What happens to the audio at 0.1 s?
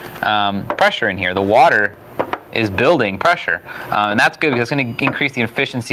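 At 0.1 s the level is pumping: it ducks under each loud sound and climbs back after, swinging by around 20 dB, and this runs through the whole clip. This gain pumping is likely from gain set far too high, with a fast limiter or compressor clamping down.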